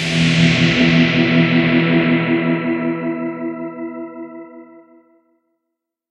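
An everyday sound recording, and nothing is technically wrong with it.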